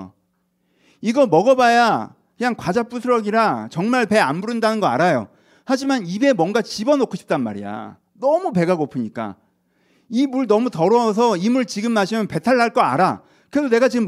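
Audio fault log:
No faults are audible anywhere in this speech recording.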